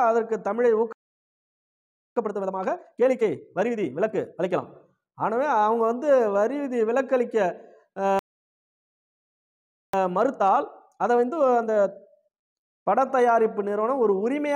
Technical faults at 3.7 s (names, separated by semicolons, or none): time-compressed catch-up